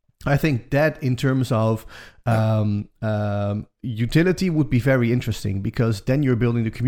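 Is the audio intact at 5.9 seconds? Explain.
No, a block size mismatch (truncated) runs from 4.60 to 6.03 s, after "of um um utility". The end of each block, which fits 1024-sample writes, is discarded, giving a 43.1 Hz buzz.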